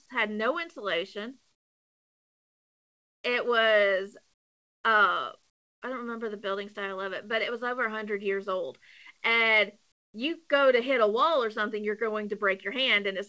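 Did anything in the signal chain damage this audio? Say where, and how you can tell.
Yes, at the call-processing stage: comfort noise in place of the background at 1.52–3.24, 4.34–4.84, 5.50–5.82 and 9.92–10.14 s. There, the room tone drops about 20 to 25 dB to a smooth, even hiss, a flat featureless band on a spectrogram, likely from discontinuous transmission swapping real background for synthetic noise.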